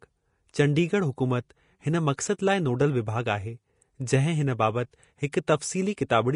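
Throughout, the speech has hissy, grainy treble and roughened tones, likely from Vorbis compression at a setting that fits about 34 kbps. Fine high detail turns into coarse noise. A spectrogram shows a hard ceiling at 10.5 kHz, with speckled, smeared texture beneath it.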